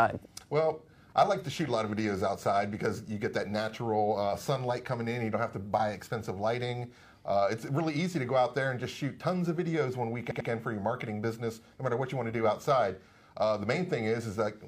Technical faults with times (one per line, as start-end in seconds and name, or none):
10.27-10.45 repeated frames